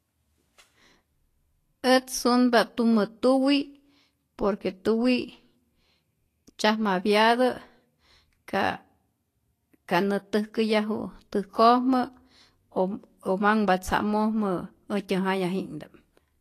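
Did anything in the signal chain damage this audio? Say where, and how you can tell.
Yes. The damage is at the codec stage and runs through the whole clip. The speech carries a hiss and grain in the treble, sibilants and consonant onsets are smeared, and nothing is present above 14.2 kHz. The likely cause is Vorbis compression at a low setting, around 33 kbps to judge by the degradation. The encoder kept a smooth spectral envelope but quantised the high-band detail so coarsely that it became noise of similar energy. Unlike a simple low-pass filter, this fills the treble with grain instead of leaving it clean.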